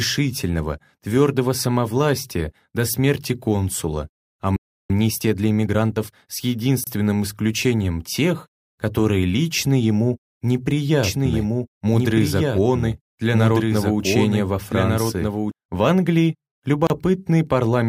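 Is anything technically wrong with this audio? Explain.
Yes, there are four kinds of fault.

At 4.56 s the sound stops dead for about 0.33 s. This is a playback stall, likely the player running out of data or being blocked, before the sound resumes.

From 4.90 to 6.22 s a time-compressed catch-up plays the backlog about 1.25 times fast. Small pieces are cut and cross-faded, so the sound is hurried at normal pitch.

At 6.84 s and again at 16.87 s, there is a gap at a join of encoded pieces. Separately encoded segments, joined about every 10 s without trimming encoder delay and padding, leave silences of roughly 28 ms and 32 ms with smeared edges.

From 11.03 to 15.51 s a doubled audio track appears. A second full-band copy, about 5 dB quieter and around one and a half seconds behind, comes in and drops out abruptly, with no room colour.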